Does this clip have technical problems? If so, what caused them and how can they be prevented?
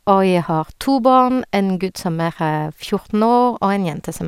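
No, this clip has no technical problems that can be heard. There is nothing here to trace back to a cause or to prevent.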